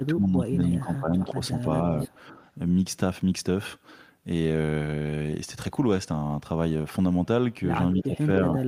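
From 0 to 1.4 s the speech dips by up to about 15 dB. This is speech suppressed in double talk, likely from an echo canceller turning down the talker while both sides spoke. At 2.03 to 2.13 s a faint copy of the speech arrives 300 ms late, about 15 dB down. This is echo leak, likely loudspeaker pickup that the canceller failed to remove. A slight dip of about 5 dB follows at 2.3 to 2.39 s, likely the same double-talk suppression. From 7.94 to 8.28 s the speech drops by about 15 dB again, likely double-talk suppression. Inside that stretch, at 7.96 to 8.03 s, a 300 ms delayed echo comes through about 10 dB below the speech, likely another echo leak. From 8.55 s to the end the speech is pulled down by about 15 dB once more, likely double-talk suppression.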